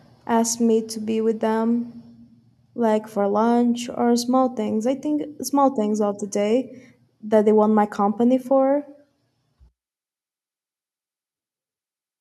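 No technical faults can be heard in this speech recording.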